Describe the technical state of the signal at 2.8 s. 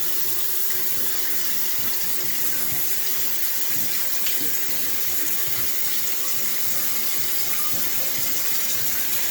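At 2.8 s, as throughout the clip, the sound carries the traits of low-bitrate audio saved at a high bitrate. The detail lost in a coarse first encode stays lost, and the later high-rate MP3 pass only preserves those artefacts, so this likely began as a low-rate encode such as Opus at 24 kbit/s. Unlike a clip simply encoded at a low bitrate, the final file's own encode adds almost nothing, and content extends up to about 20.1 kHz.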